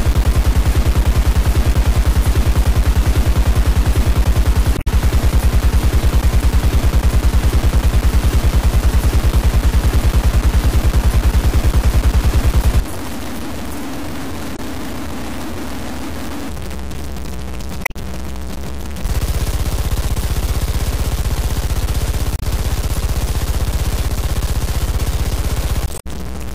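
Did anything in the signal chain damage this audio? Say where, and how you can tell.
Yes. Throughout, the sound is coarse and grainy, with distortion that tracks the signal and an error floor only about 15 dB down. That points to sample-format conversion, likely low bit depth without dither: truncation to about 4 bits, not added noise.

Damaged data in a compressed stream, at the codec or storage stage, shows as brief disturbances at 4.74–4.88 s, 14.52–14.59 s, 17.82–17.96 s, 22.36–22.42 s and 25.96–26.06 s. The decoder misread corrupt frames and resynchronised.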